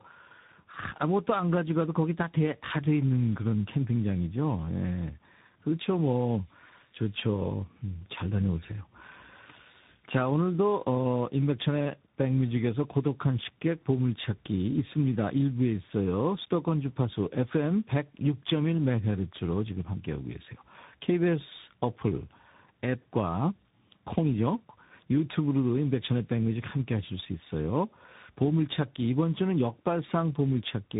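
From start to finish the speech carries tandem speech coding: a low-rate CELP-style coder followed by a delta-modulation coder, likely a G.729A-to-CVSD chain, the later one re-encoding the earlier one's errors. The result sounds rough, muffled and warbly, with nothing above 3.8 kHz.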